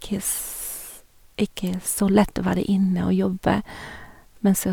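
No dropouts, clicks, distortion or level jumps turn up anywhere in this speech recording.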